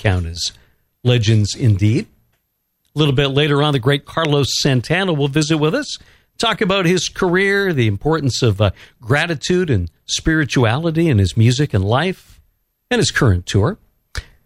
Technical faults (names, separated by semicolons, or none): none